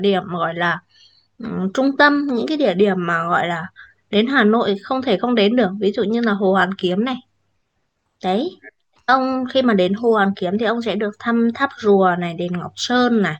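Speech, with imaging from linear upsampling throughout. The top of the band sounds dulled. A faint metallic shimmer sits on sibilants. The rate was raised by joining samples with straight lines, which filters poorly. A mirrored copy of the spectrum survives between 12 kHz and 24 kHz, roughly 40 dB below the signal. That band placement points to a 24 kHz original raised to 48 kHz.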